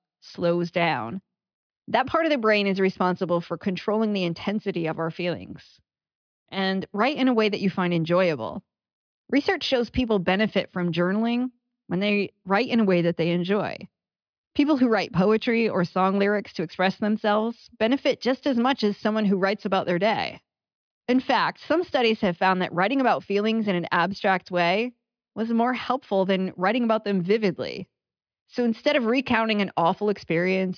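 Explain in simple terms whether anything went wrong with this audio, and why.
Nothing went wrong here: the speech comes through steadily, with no dropouts, distortion, glitches or other technical faults to be heard at any point.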